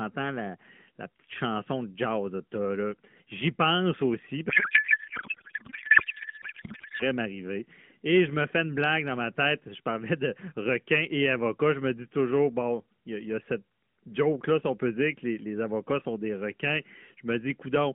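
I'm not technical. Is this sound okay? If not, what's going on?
No. A codec payload misread runs from 4.50 to 7.03 seconds: the speech turns into garbled noise and warble that barely tracks it. This clip travels through an AMR narrowband mobile codec, which packs the sound into small numbered chunks of data. Here the receiving end expected those chunks packed one way when they were actually packed another, so it pulled every piece of information from the wrong position and rebuilt nonsense until the two sides lined up again.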